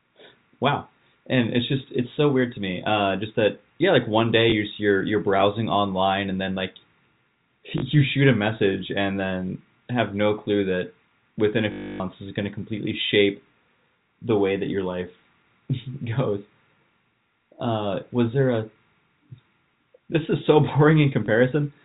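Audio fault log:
4.5 s, 7.78 to 7.82 s, 21.26 s: packet loss with last packet repeated. Gaps of 20 ms and 40 ms are filled by replaying the preceding chunk of audio.
11.72 to 12.0 s: packet loss with last packet repeated. A 280 ms hole is filled by looping one chunk repeatedly. This gives a robotic buzz at about 50 Hz, which fits 20 ms packets, heard within the telephone band below 4 kHz.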